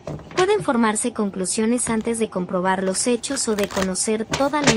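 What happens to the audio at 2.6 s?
Nothing goes wrong at 2.6 s; the audio there plays through intact, with no dropout, click or other fault.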